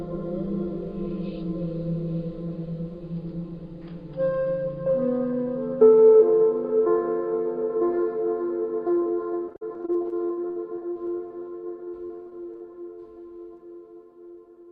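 From 9.45 to 11.45 s, and again from 11.84 to 12.62 s, repeated packet loss (robotic sound) leaves holes of up to 48 ms, each patched by stretching the last sound into choppy chatter. The spectrogram shows smeared, repeating bands; the waveform shows looped blocks.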